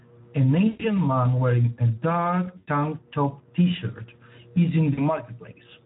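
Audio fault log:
Throughout, Speex codec: plainly audible coding damage, with the speech sounding noisy and hoarse, which fits a Speex setting around 11 kbps. At that rate the CELP coder has few bits left for the excitation, so the fine detail gets roughened.
0.67–0.88 s, 2.57–2.69 s and 4.93–5.02 s, VoIP packet loss concealed by the speech codec: gaps of 120, 100 and 40 ms get stretched into a buzzy tone or coloured noise that fades. The first two land just before "man wearing a" and "tank top tshirt is", and the third just after "tank top tshirt is". The decoder keeps extrapolating its last pitch and filter at shrinking gain, so each gap comes out as a smeared, weakening sound.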